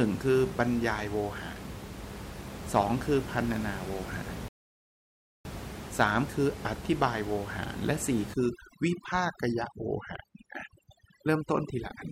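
At 4.48 s the speech cuts to silence and resumes at 5.45 s, a rebuffering stall. Playback ran out of downloaded audio and waited nearly a second, about 0.97 s, for more to arrive. Unlike a dropout, where a gap swallows part of the signal, the speech picks up exactly where it stopped, so nothing is missing. The silence is simply inserted, stretching the timeline.

From 8.34 s to the end, overdone noise removal takes hold. Before this the room noise sits about 11 dB below the speech. Here the noise reduction cuts individual frequency bands hard whenever they fall near its noise estimate. The background collapses to near silence flecked with twinkling specks, and quieter parts of the speech vanish along with it. A codec artefact would smear the speech, whereas this pattern of gating, with bands switching off band by band, points to the denoiser.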